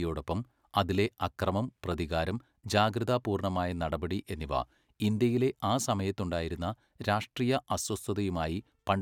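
No technical faults can be heard anywhere in this speech recording.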